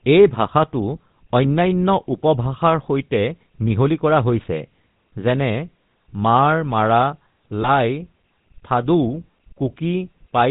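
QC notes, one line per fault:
throughout: GSM full-rate codec. The speech has that buzzy, gravelly edge, and it's plainly audible. The codec rebuilds each voice from a vocal-tract model fed by an evenly spaced pulse train that keeps just a third of the excitation samples, so fine detail turns coarse and rasping. Nothing comes through above 4 kHz, so sibilants and brightness are gone and it sounds boxed-in. That character fits 13 kbps full-rate GSM.
7.62 to 7.69 s: lost GSM frames. There's a short rough, metallic ringing here where the decoder lost a frame and covered the gap by replaying the last good frame's settings. The same filter state gets held and re-excited, so the speech freezes into a tinny buzz for a moment. It's brief enough that it doesn't fade to silence, which fits a single dropped 20 ms frame.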